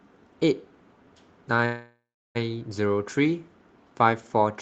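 At 1.65 s the speech stalls for about 0.7 s, a call audio freeze. The last sound smears into a fading buzz, then silence, likely from a starved jitter buffer. It resumes at 2.37 s with nothing lost, just late.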